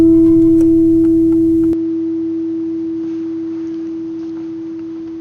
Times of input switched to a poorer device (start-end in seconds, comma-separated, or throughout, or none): 1.73-5.21